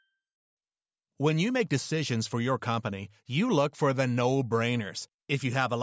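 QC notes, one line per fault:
No faults heard in this speech recording.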